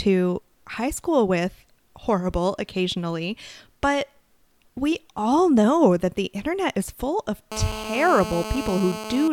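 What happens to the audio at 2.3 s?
Nothing goes wrong at 2.3 s; the audio is intact at that moment, with no break, glitch or change in level.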